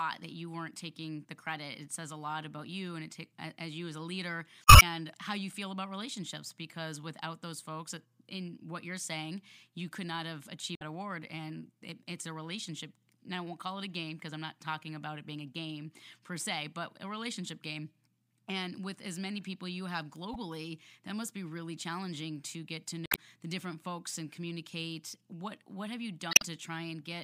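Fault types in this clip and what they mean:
Damaged data in a compressed stream: corrupted bytes in the encoded speech make the decoder misread frames and lose sync until it finds a valid header, producing short chirps or squawks at 4.64–4.83 s (after "you as a leader"), 10.74–10.82 s, 20.33–20.36 s, 23.06–23.17 s and 26.30–26.43 s. On a spectrogram each shows as a brief broadband smear or blocky patch breaking the speech harmonics. The waveform shows an abrupt, irregular burst with hard edges.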